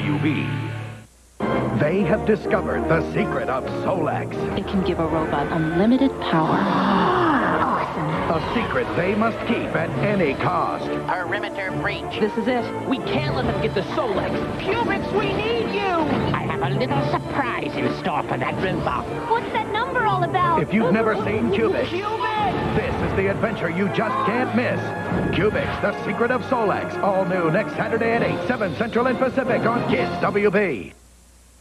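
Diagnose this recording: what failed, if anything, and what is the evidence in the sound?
Nothing failed; no stage shows any fault.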